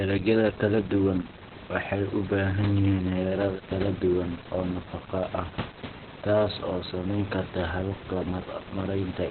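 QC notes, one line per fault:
Throughout: Opus voice compression, running in its SILK speech mode at a low rate that points to roughly 8 kbps in narrowband. Nothing survives above about 4.3 kHz, so the speech sounds muffled, hoarse and slightly robotic from coarse excitation coding. A spectrogram shows a hard ceiling near 4.3 kHz. The room noise, about 13 dB below the speech, comes through it burbling.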